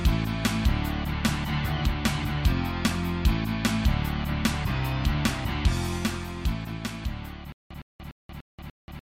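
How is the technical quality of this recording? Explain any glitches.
The recording breaks down near the end with a stutter with silent gaps. From 7.52 s to the end, a 112 ms burst repeats five times. Each is followed by 182 ms of digital silence, a 294 ms cycle. The likely cause is a stalled player replaying its last fragment at each retry. The audio meant for that stretch is lost.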